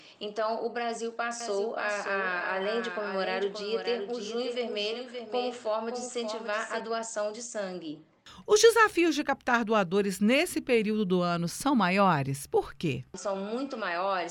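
A slower second capture path likely mixed the audio in twice from 1.41 to 6.80 s, giving a doubled audio track about half a second behind and somewhat quieter.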